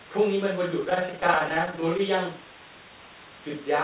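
Repeated stalls (stutter) run from 0.8 to 2.01 s. Packets kept arriving late, so the jitter buffer ran dry over and over, about two dozen times, and each time the receiver stretched the last bit of sound until fresh audio arrived. Each stall is short, at most 13 ms, but together they add about 219 ms, nearly a fifth of that stretch. Nothing is lost, yet the speech drags and judders, heard through the call path's telephone-band sound that stops at 4 kHz.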